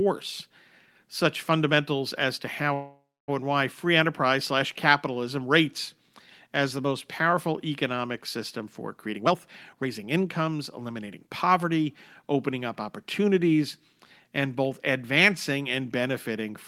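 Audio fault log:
2.73–3.30 s, call audio freeze: the sound smears into a fading buzz, then about 0.26 s of silence. Delayed packets likely emptied the jitter buffer. Nothing is lost, but later audio runs 545 ms late.
9.02–11.65 s, jitter buffer speed-up: the audio runs 20% fast at unchanged pitch and sounds hurried. Tiny pitch-period slices were cut, roughly half a second in all, shrinking the delay.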